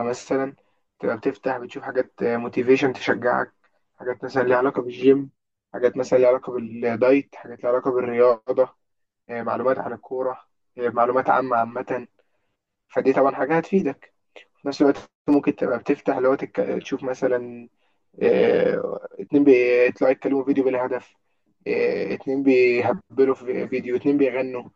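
One channel of this speech recording arrives around 10 ms late, and the two are summed to mono for the whole clip, causing channel delay (comb filtering). Cancellation starts near 50 Hz and repeats at roughly every 100 Hz above it, leaving the voice hollow and phasey throughout.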